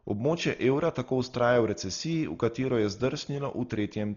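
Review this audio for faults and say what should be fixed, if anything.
The speech sounds dull and boxed-in from start to finish, with nothing above 7 kHz and a rough, fluttering hiss clinging to the voiced sounds. That pattern fits heavy Dolby Digital compression, likely at a very low bitrate around 32 kbps. Starved of bits, the encoder cuts the top of the band and leaves many frequency lines without mantissa data, so the decoder fills those gaps with dither noise that smears around each tone. Encode at a substantially higher bitrate, or keep an uncompressed or lossless master so the low-rate AC-3 stage never sits in the chain.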